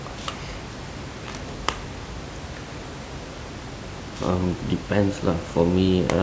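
No technical faults are audible; the only background is the room's own noise, sitting about 11 dB under the speech, which belongs to the recording rather than the system.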